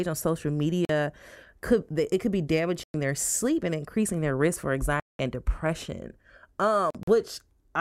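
The speech cuts to silence at 0.85 to 0.89 s, 2.83 to 2.94 s and 5.00 to 5.19 s, then stutters through brief gaps between 6.90 and 7.08 s. Each time it resumes further along, as if it had kept playing. That's likely a Bluetooth dropout, with packets missing the headphones.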